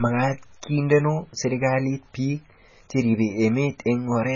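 From start to finish the speech carries heavy damage from what's likely MP3 compression. Nothing comes through above about 7.1 kHz, so the top end is sliced off flat and the s sounds lose their sparkle. That hard ceiling and the amount of damage fit a very low bitrate, something like 16 kbps, where the encoder runs out of bits, drops the treble and lets quieter frequency detail flicker in and out between frames, giving the voice a watery, swirly edge.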